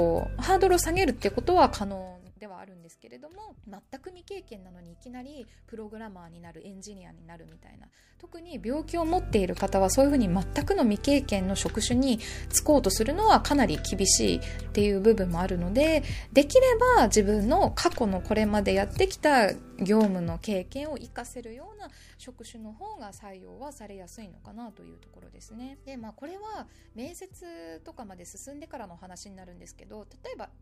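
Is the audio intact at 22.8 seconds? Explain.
Yes, the audio is intact at 22.8 seconds, with no fault audible at that moment.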